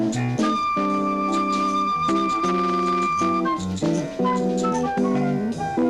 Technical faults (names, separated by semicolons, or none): none